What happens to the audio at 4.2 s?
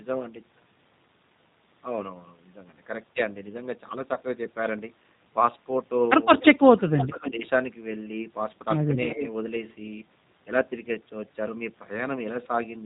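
Between 4.14 and 4.19 s, VoIP packet loss concealed by the speech codec: the decoder bridges about 20 ms of missing audio, consistent with one lost packet, by extrapolating its last pitch and filter. On the waveform this appears as a short repeated, decaying stretch, and on a spectrogram as smeared detail fading before normal detail returns. Underneath, the G.729 codec at 8 kbit/s keeps everything slightly rough and synthetic, with the spectrogram showing nothing above 4 kHz.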